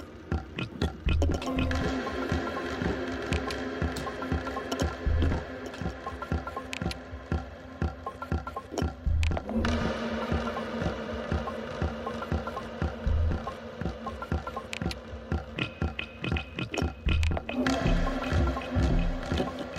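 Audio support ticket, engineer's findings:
No faults found on listening, so there's nothing to chase on this one and the ticket can be closed out.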